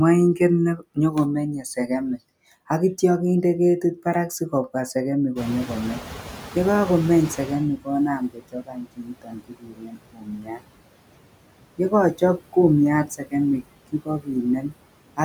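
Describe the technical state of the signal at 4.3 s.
At 4.3 s the background noise dips away in the gaps between words and returns underneath them, pumping in step with the speech. These are noise suppressor artifacts, present for the whole clip. The suppressor treats steady noise as something to remove, estimating it band by band on each short frame and cutting it by about 21 dB. During speech those bands are kept, so the noise reappears there, and that pumping is what you hear.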